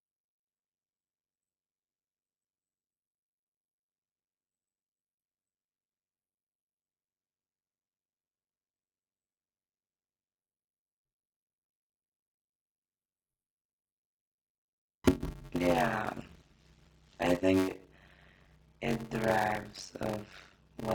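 Block size mismatch (padded) runs through the whole of this speech clip. One stage is delivering shorter blocks than the next stage reads, and the shortfall in each block is filled with silence. The result is a steady buzz at about 93.8 Hz, which fits a 512-sample read block. Because of the inserted gaps, the speech plays at 0.625 times its normal speed while keeping roughly its natural pitch.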